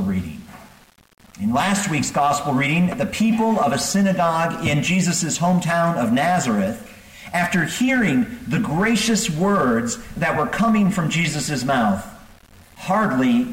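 From start to finish the sound carries a grainy, gritty distortion that shifts with the signal and roughens quieter passages, sitting only around 35 dB below the level. The likely cause is low bit depth without dither: rounding to about 7 bits, leaving error that tracks the signal.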